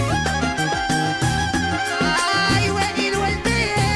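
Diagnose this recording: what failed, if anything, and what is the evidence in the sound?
Nothing failed; no fault can be heard here.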